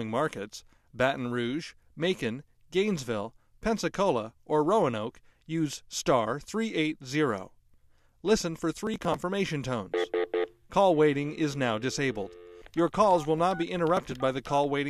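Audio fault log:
8.80–9.16 s, processor overload crackle: a short burst of gritty, tearing crackle rides on the sound. The processor fell behind and skipped a rapid string of very small buffers, each leaving a hard-edged gap. The spacing fits buffers of about 3 ms.
13.97–14.14 s, processor overload crackle: a briefer flurry of the same gritty crackle. Again a handful of tiny buffers, about 3 ms each, were skipped under load, and the abrupt gaps strung together before the overload cleared.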